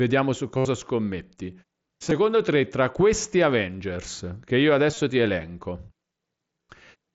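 Concealed Bluetooth headset packet loss occurs at 0.57–0.65 s, 2.10 s, 4.91–4.97 s and 6.68 s. Lost headset packets were filled by repeating a recent matching stretch of waveform. The 75 ms gap buzzes, showing as identical repeated cycles and frozen spectrogram harmonics.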